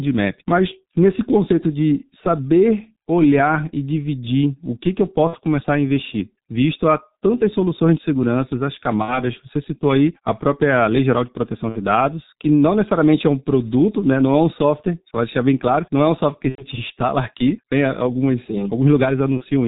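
From start to finish the speech carries heavy G.723.1 codec damage at 6.3 kbit/s: nothing above 4 kHz survives, and the slowly updated 30 ms voice model leaves the voice muffled and hoarse, with consonants smeared together.

VoIP packet loss concealed by the speech codec interrupts it five times: 5.27–5.38 s (after "o que que eu", before "começar a investir visto"), 9.02–9.24 s (after "soluções de seguranças as"), 11.69–11.79 s, 16.49–16.67 s and 19.37–19.44 s. Each gap sounds like one to three missing 30 ms frames, which the decoder fills by extending the last pitch and filter into a buzzy tone or coloured noise that fades.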